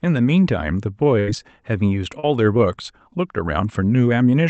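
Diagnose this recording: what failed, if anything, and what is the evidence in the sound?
A burst of packet loss on the network, from 1.19 to 1.30 s: about 80 ms of speech is gone, replaced by the last sound continued and fading before the speech resumes further on. On a spectrogram the last sound holds steady and dims, then the real audio returns.

Short concealed packet loss, also a network fault, at 2.19 to 2.26 s: about 35 ms was rebuilt from the preceding sound, giving a brief smear. The spectrogram shows a blurred sliver under the Opus path's 8 kHz ceiling.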